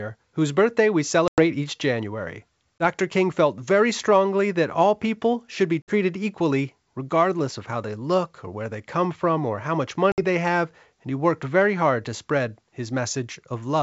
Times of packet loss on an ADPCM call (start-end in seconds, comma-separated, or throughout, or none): 1.28-1.40, 2.78-2.84, 5.82-5.92, 10.12-10.20